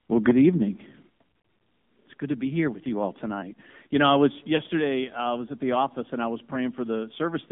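Throughout, the sound carries AMR narrowband mobile codec coding: the band runs only from about 150 Hz to 3.5 kHz, with a buzzy, synthetic texture that fits a low AMR-NB mode near 7.4 kbps. Because it is constant, it is a codec fault rather than a passing radio or level fault.

From 0.28 to 0.49 s the loudest syllables take on a harsh, crackling edge, likely microphone overload, with peaks about 5 dB past the converter's limit and a few percent of samples flattened. Codec buzz is smooth and ever-present; this grit appears only on peaks. A second, milder overload at 3.96 to 4.26 s, about 3 dB over, clips only a small share of samples.

At 0.31 s, and again at 1.32 s, the whole level drops in a single step, by about 4 dB and then about 6 dB, likely a microphone volume stepped down by the call software reacting to the overload. Unlike a fade or lost frame, voice and background fall together and stay lower.

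Around 4.56 to 4.61 s, just before "I was at the", a lost AMR speech frame gives a brief warble and dip, a single 20 ms frame concealed by the decoder from the previous frame's settings. The voice comes back weak or rough only for a moment, whereas the level step that follows at 4.8 s, about 5 dB down, persists.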